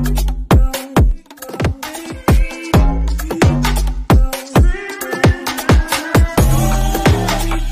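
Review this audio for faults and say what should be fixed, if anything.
Clock drift buffer slips from 0.16 to 6.81 s: clicks about every 0.95 s, likely from two unsynchronised clocks differing by several hundred ppm, dropping or repeating a few dozen samples each time. To prevent it, lock both devices to one word clock or add asynchronous sample-rate conversion between them.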